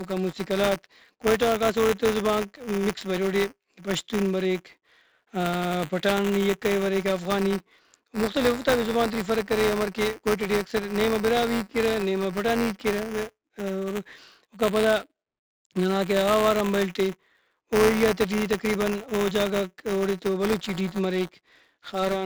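From start to finish the speech carries 4-bit ADPCM compression, and the damage is heavy. Each sample is coded as a coarse 4-bit step from a predicted value, so the coding error rises and falls with the level: a gritty hiss rides on every loud syllable and fades in pauses, unlike a fixed noise floor. Sharp onsets crack because the adaptive step lags behind. The overall grain fits a 64 kbps stream.

Buffer tearing runs throughout as well. The writing and reading sides of a ring buffer have drifted into each other, so a small slice of every period holds audio from roughly a hundredth of a second earlier, spliced in with hard joins. The result is a steady robotic buzz at 188 Hz, which fits a 256-sample buffer. It sounds only while speech is present. Its fixed rate separates it from random dropouts or clock jitter, whose clicks come at irregular intervals.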